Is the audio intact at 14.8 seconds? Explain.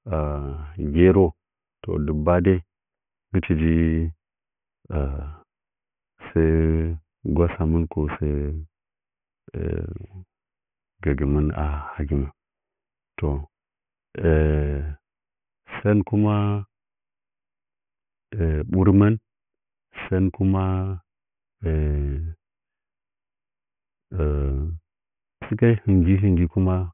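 No. Aliasing affects the speech at 14.8 s and throughout. Content above 3 kHz was not filtered before the rate reduction, which fits a drop to 6 kHz, so it folds back below 3 kHz as gritty, metallic sibilance roughly 25 dB under the signal.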